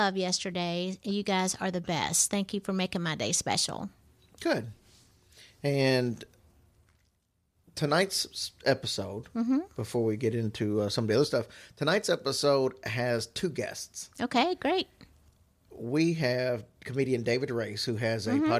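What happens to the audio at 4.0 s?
Right at 4.04 s, just after "making my day special", there's a lost LE Audio frame. The gap is about 10 ms, which fits a single dropped LC3 frame. The decoder covers the hole by replaying the previous frame's spectrum with its phases scrambled. So instead of a click or dropout, the speech gets a tiny noisy smear, a grainy blip where the tonal detail briefly turns to hiss before normal decoding picks straight back up.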